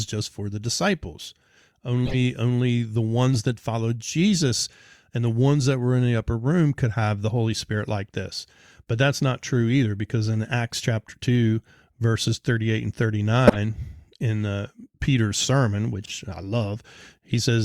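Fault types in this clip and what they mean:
Corrupt frame decoded: the decoder played compressed frames containing flipped bits, so misread gains and codes put energy at the wrong frequencies. Each event is a brief chirpy burst, the loudest near 13.5 s and another just before "only the" at 2.1 s.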